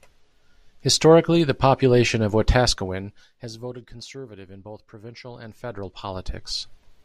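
A speech clip where, just after "the population of", the level falls by roughly 20 dB between 2.56 and 3.83 s with zipper noise on it: a fine ticking that rides on the sound while the gain drops. The reduction is applied in unsmoothed steps, about a hundred per second, and each jump leaves a small click. A properly ramped fade would lower the sound without this audible grain.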